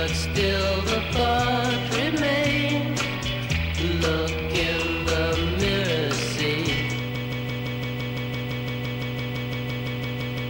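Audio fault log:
7.15–10.49 s, broken-record loop: the sound locks onto a fragment about 0.17 s long and repeats it exactly, back to back, about 20 times until the clip ends, giving a rapid, mechanical stutter with no forward progress. This is likely a stalled player, encoder or stream that kept re-sending the last chunk it held, so the audio that should have filled those final seconds never arrives.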